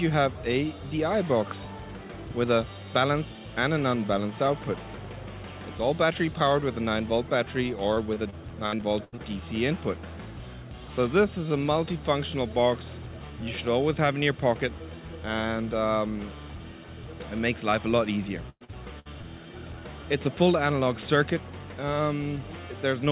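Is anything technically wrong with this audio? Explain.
Yes, there's repeated packet loss (robotic sound) from 7.94 to 9.20 s and again from 18.50 to 19.25 s. Short runs of audio go missing, and each hole gets patched by stretching the last bit of sound. That turns both stretches choppy, with pieces missing. The longest gaps are 80 ms and 110 ms. Everything's capped at 4 kHz, which points to a narrowband call codec.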